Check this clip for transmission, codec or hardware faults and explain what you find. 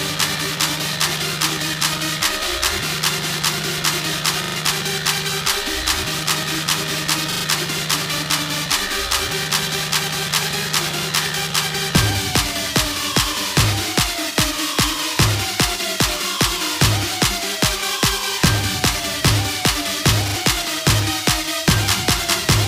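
There are three stutters from a repeated buffer, at 4.44–4.56 s, 7.32–7.44 s and 20.28–20.36 s. Audio arrived late, so the last block, which fits a 40 ms buffer, replayed three, three and two extra times, with hard joins. It's a quick stuttery buzz, and about a tenth of a second of audio goes missing the first two times, about 70 ms the last.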